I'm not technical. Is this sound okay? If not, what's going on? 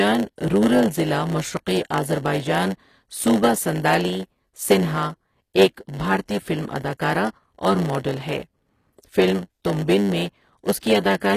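No. A steady 100 Hz buzz runs throughout, and the speech plays about 8% slow. That is a block size mismatch (padded): tiny silent gaps fill every block, unlike a constant electrical hum.

The treble sounds plainly gritty and metallic, with nothing above about 14.9 kHz, likely from HE-AAC compression rebuilding the upper range from lower sounds.

At 10.80 s, a brief hiss of about 25 ms comes just before a sharp sound. That is pre-echo, tied to that one attack rather than spread through the audio.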